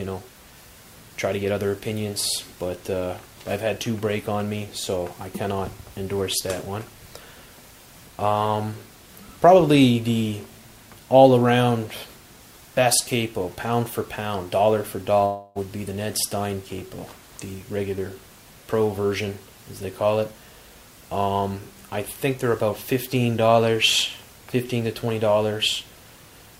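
At 15.25 s the sound turns into a smeared buzz that fades over about 0.3 s, then the audio resumes at 15.58 s with roughly 0.3 s of material skipped. This is likely a long network dropout, with the receiver stretching the last sound to cover the gap.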